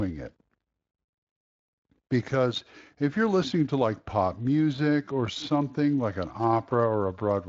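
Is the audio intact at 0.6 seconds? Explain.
Yes, the speech at 0.6 s plays through the Speex coding intact, with no dropout, click or other fault at that moment.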